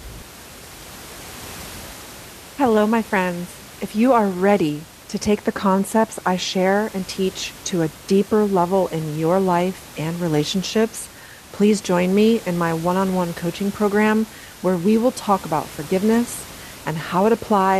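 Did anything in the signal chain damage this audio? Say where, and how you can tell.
No, nothing in the signal chain damaged this audio.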